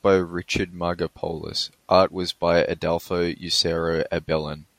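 Nothing in this short bit of speech stands out as a technical problem.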